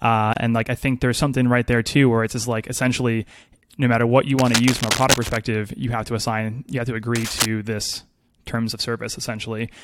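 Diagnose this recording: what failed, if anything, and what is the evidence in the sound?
The speech was encoded in separate pieces and joined without trimming the encoder's start delay and end padding, a codec-stage fault. The result is a gap at a join of encoded pieces: about 28 ms of silence from 0.33 to 0.36 s, with smeared edges, before "and like I think" carries on.

A worn cable, connector or control being moved is the likely cause, in the analogue wiring. Its fluctuating contact resistance produces cable scratch noise, dense uneven crackle from 4.36 to 5.37 s, after "no matter what you", at roughly speech level, and again, somewhat quieter, from 7.15 to 7.46 s, before "this terms of".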